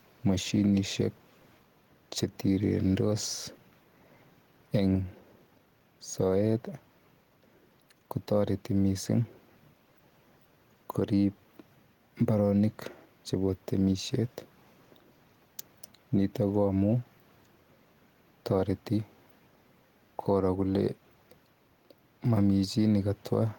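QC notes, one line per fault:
Throughout: gain pumping. The level swings by around 5 dB. Loud and quiet passages sit closer together than they naturally would, so the speech sounds squashed and breathing. The likely cause is input gain set well above what the microphone needs, with a fast limiter or compressor pulling it back down on every loud sound.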